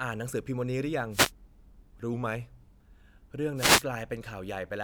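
It's a short speech recording with two kinds of trouble. There's a wireless microphone noise hit from 1.11 to 1.32 s and another from 3.55 to 3.84 s, each a quick swish of static as the radio link fades and receiver noise rises. Between them, from 2.13 to 2.75 s, everything slows by about 6% and drops roughly a semitone (about 109 cents), likely a drift correction step in clock-matching software.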